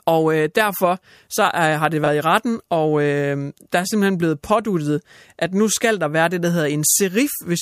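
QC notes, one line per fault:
2.04 to 2.08 s, chunks out of order: two 20 ms pieces of the speech swap places, so the later one plays first and the delayed one lands a chunk late. Nothing goes missing, but the three abrupt joins give a quick jumbled stutter.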